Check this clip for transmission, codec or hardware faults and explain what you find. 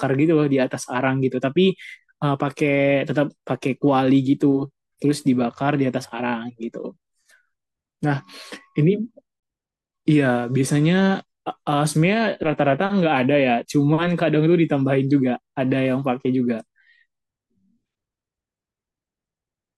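One codec fault is present in the speech: a gap at a join of encoded pieces, from 9.40 to 9.43 s. The audio was apparently encoded in separate 10 s segments and butted together untrimmed, so the encoder's start-up delay and final-frame padding remain as a 30 ms gap. The codec smears its edges, so the truly silent part is shorter. Unlike a packet-loss dropout, nothing is missing: the speech resumes exactly where it stopped, with no concealment artefacts.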